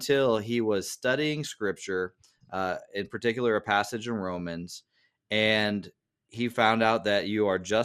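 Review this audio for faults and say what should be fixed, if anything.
Low-rate MP2 compression is the likely cause of the dull, gurgling graininess across the whole speech clip. Starved of bits, the encoder switches off upper sub-bands and coarsely quantises those left, which fits a bitrate of about 80 kbps. Encoding at a higher bitrate would prevent this.

DAB burbling occurs at 4.39 s, just after "particular a passage in". Bit errors, at a rate of around a tenth of a percent, got past error correction into the MP2 data across four frames. The corrupted data disturbed individual sub-bands, producing a brief burble. Stronger reception or more robust error protection would prevent it.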